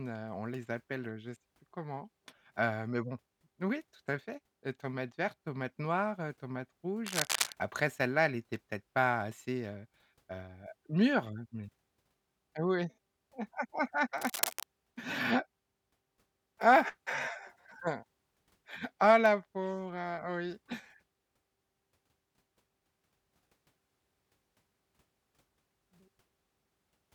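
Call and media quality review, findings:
Cable scratch noise, 7.06–7.52 s and 14.16–14.63 s. Dense, uneven scratching bursts over the speech, first around speech level, second somewhat lower. Likely a worn cable or connector carrying DC, moved, contact resistance fluctuating rapidly.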